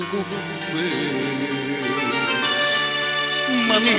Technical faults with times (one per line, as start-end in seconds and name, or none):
none